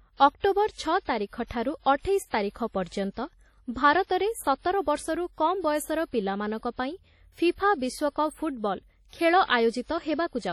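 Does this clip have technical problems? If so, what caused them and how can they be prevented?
Yes. Throughout the speech there is heavy ringing and a washy hiss that swells and fades with the signal. Nothing is present above 18.2 kHz. This is likely WMA compression, consistent with a 32 kbps encode whose long transform blocks smear quantisation noise. To prevent it, record and deliver at a higher bitrate or in a lossless format.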